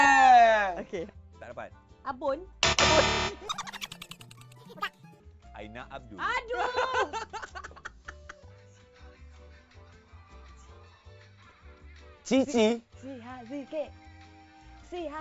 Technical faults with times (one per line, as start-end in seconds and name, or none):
3.48-5.20 wrong sample rate